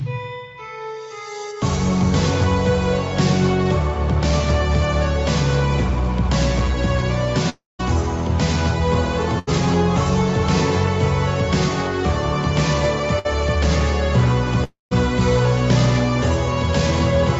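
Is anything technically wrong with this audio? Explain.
Yes. There are gaps from network loss.

From 7.49 to 7.81 s, and again from 14.64 to 14.93 s, there is a long network dropout. The sound trails into a fading buzz or hiss. Then comes near-silence, about 0.17 s and 0.15 s long. The likely cause is audio that never arrived, so roughly 0.3 s is lost each time.

At 9.39 to 9.49 s and 13.19 to 13.27 s, a burst of packet loss occurs. About 80 ms and 60 ms of audio are missing. The receiver stretches the last sound and fades it, giving a brief held buzz or hiss before playback resumes further on.

The sound has no content above 8 kHz. That limit fits the call path's coding bandwidth.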